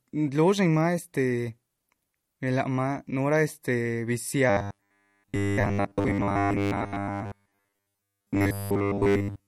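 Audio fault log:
throughout: MP3 compression, plainly audible watery swirl and smeared attacks, likely a low-bitrate encode near 48 kbps.
4.50 to 9.47 s: robotic sound from repeated short buffers, a rigid metallic 100 Hz buzz across most of the sound, likely 10 ms chunks replayed, unlike codec swirl.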